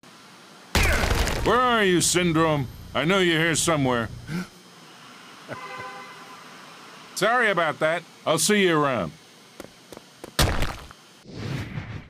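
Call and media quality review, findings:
No faults found in this clip. Nothing to log against any component in the chain.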